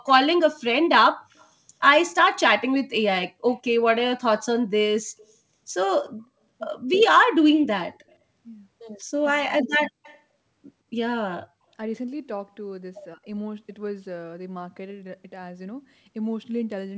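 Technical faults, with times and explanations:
1.33–1.48 s, 3.48–3.54 s, 7.94–8.15 s and 10.03–10.2 s, echo leak: faint scraps of the voice come back about 167 ms late, sitting roughly 30 to 40 dB under the main speech. The far end is likely on a loudspeaker whose echo canceller let a bit of its mic pickup slip through.
9.23–9.97 s and 13.15–13.21 s, speech suppressed in double talk: the talker dips in pieces, around 400 ms in total and as deep as about 40 dB in the first stretch, then a brief shallow dip of about 10 dB. The echo canceller likely mistook overlapping talk for echo and ducked it.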